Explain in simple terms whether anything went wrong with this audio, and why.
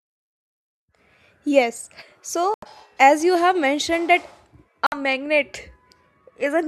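Bluetooth dropout, twice. At 2.54 s the speech cuts to silence until 2.66 s, just before "as you have mentioned", and again from 4.86 to 4.97 s. Each gap starts and ends suddenly or with a very short fade, and the speech resumes further along, as if it had kept playing through the silence. This likely happened because chunks of audio did not reach the headphones in time and were dropped. A handful of lost packets would fit gaps of this length.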